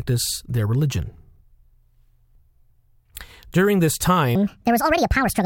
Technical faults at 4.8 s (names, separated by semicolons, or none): section at the wrong speed